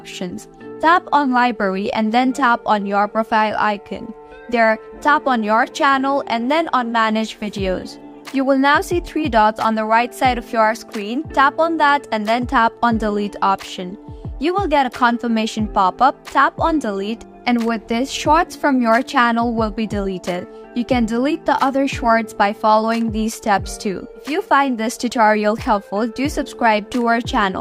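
No technical faults are audible anywhere in the recording.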